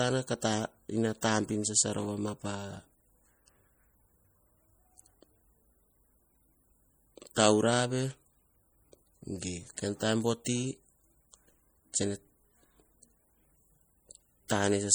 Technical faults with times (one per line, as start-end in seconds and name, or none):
0.00-14.94 MP3 compression
1.21 pre-echo
10.45 pre-echo
14.48 pre-echo